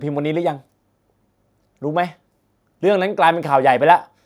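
No technical faults are audible anywhere in the recording.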